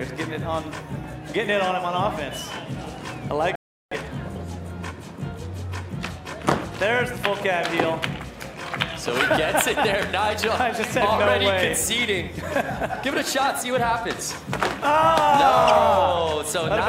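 At 3.55 s the sound stops dead and falls to silence. It stays silent until 3.92 s, then picks up exactly where it broke off. This is a rebuffering stall. The player used up its downloaded audio and had to wait for more data before it could continue. No sound is skipped or repeated across the gap. Instead, about 0.36 s of dead air is inserted, stretching the clip's timeline by that amount.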